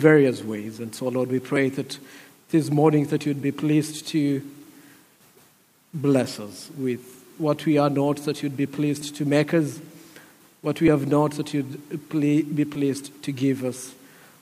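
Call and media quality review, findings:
Regular clicks from 1.56 to 12.75 s, one about every 1.87 s, roughly seven in all. Likely clock drift buffer slips between two devices whose clocks disagree by around 500 ppm, so a small block of samples gets dropped or repeated each cycle.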